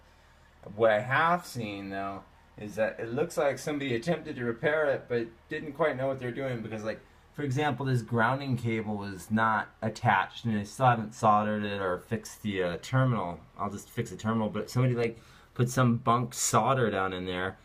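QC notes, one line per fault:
No faults were found in this clip. There is nothing to log on any line.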